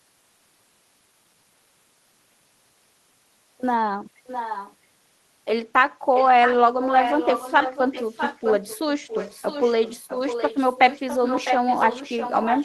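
A delayed copy of the speech comes back from 4.27 to 4.75 s, again from 6.14 to 6.55 s, from 6.81 to 8.79 s, and from 9.07 s to the end. This is echo leak. It trails the original by about 0.66 s. It sits roughly 10 dB below the speech in the first and last stretches, and nearer 5 dB below in the middle two. The likely cause is a far-end loudspeaker whose echo canceller let its pickup through.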